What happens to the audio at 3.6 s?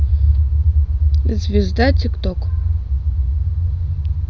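At 3.6 s the audio is intact, with the speech continuing without any dropout, click or distortion at that moment.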